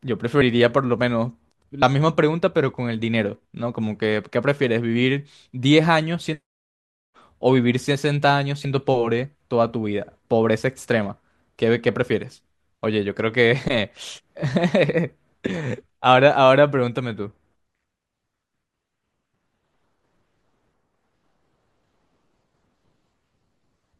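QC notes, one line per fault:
0.40 s, 1.81 s and 8.64 s: compressed frames skipped. At each point the speech lurches forward, losing about 40 ms, then about 70 ms, then about 40 ms. Whole blocks of the coded stream were dropped, either missing or rejected as damaged, so playback jumps ahead by two or three frames, which fits a frame length near 21 ms.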